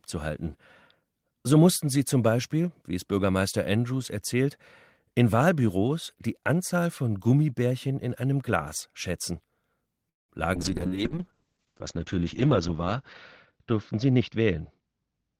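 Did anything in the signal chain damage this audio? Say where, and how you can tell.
Yes, at three points, all in the call path. The first is at the network and jitter buffer stage: a call audio freeze from 10.09 to 10.32 s. The packets were likely delayed in transit, so the buffer ran dry and the receiver filled about 0.2 s, almost all of it silence. Playback then resumes where it stopped, with nothing lost, but the whole stream now sits about 0.2 s later.

The second is at the codec stage: a call bitrate drop from 10.58 s to the end. The bandwidth estimate fell, and the encoder went from 32 kbit/s to 8 kbit/s, staying at the lowest rate for about 2.1 s. Coarser coding makes the speech rough and watery. Audio bandwidth shrinks from 20 kHz to 8 kHz, so the top end goes dull and muffled.

The third is in the jitter buffer: a jitter buffer speed-up from 14.05 to 15.38 s. The buffer held more audio than its target. 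To shed the excess delay, the receiver repeatedly cut short pitch-period slices, trimming roughly 0.15 s in total. The speech plays at about 109% speed with unchanged pitch, so it sounds hurried.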